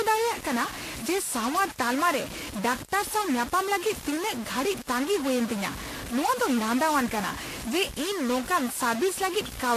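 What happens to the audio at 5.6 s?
At 5.6 s the speech is caught in two faults that run through the whole clip. A data line or converter bit is likely stuck at a fixed value, so about half the samples sit off by that bit's weight. That gives distortion riding on the speech, and the quieter gaps fill with noise rather than falling silent.

The audio was also likely transcoded between lossy codecs, the artefacts pointing to a low-rate Vorbis encode followed by a WMA encode at a modest bitrate. The second codec spends bits re-encoding the first one's artefacts and adds its own, so the two sets of artefacts are heard layered together, with nothing above 14.2 kHz.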